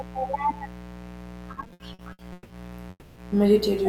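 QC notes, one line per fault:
Throughout: mains buzz. A steady, raspy 60 Hz buzz sits roughly 20 dB below the speech. Sharp switching spikes from a dimmer, rectifier or poor shielding add harmonics reaching several kilohertz. That gives it an edge rather than a pure hum.
1.53 to 2.52 s: repeated stalls (stutter). The speech catches and drags nine times. The longest hold is 170 ms. About 400 ms of stretched sound fills some 41% of this span. Late packets kept emptying the jitter buffer, so the last sound was extended each time.
2.90 to 3.18 s: call audio freeze. The sound hangs for about 260 ms, fading into a 30 ms silence, then resumes where it stopped. Nothing is lost, but everything after arrives 260 ms later. The likely cause is delayed packets draining the jitter buffer.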